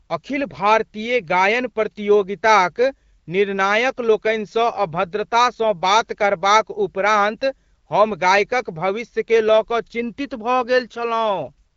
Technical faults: none

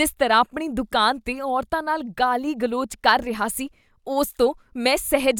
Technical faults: none

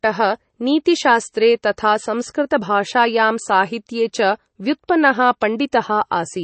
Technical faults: MP3 compression; pre-echo

